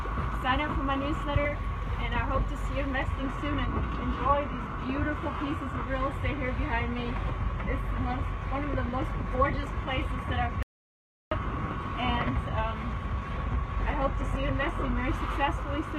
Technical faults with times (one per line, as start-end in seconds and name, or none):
3.09-15.09 adaptive stream at a lower bitrate
10.63-11.31 audio dropout to silence